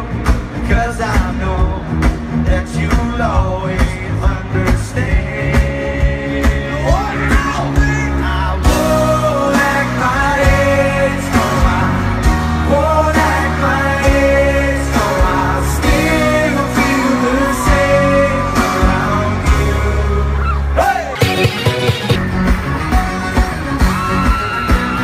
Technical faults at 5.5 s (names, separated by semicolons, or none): none